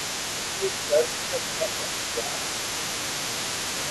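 From the start to the end of the speech, a second voice runs underneath the main talker. It is only a little quieter than the talker. This is the other side's voice leaking through. The likely cause is a loudspeaker on the talker's device playing the far end, with the echo canceller leaving part of it in the microphone signal. The leaked voice never fully drops away.

Between 0.79 and 1.89 s the talker's level sags in patches, adding up to well over half a second. The dips are modest. Two shorter dips follow, from 2.11 to 2.39 s and from 2.76 to 2.86 s. The last is the deepest and briefest. This is speech suppressed in double talk. The likely cause is both sides speaking at once, so the echo canceller could not tell the talker from the echo and turned both down.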